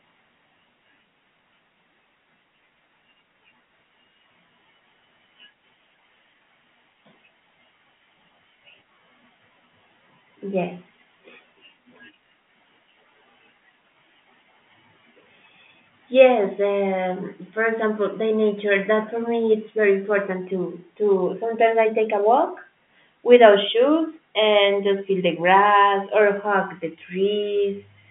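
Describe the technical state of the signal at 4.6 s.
At 4.6 s the signal is intact, with the speech passing cleanly through the G.711 telephone coding and its narrow line band, nothing audible above about 3.7 kHz.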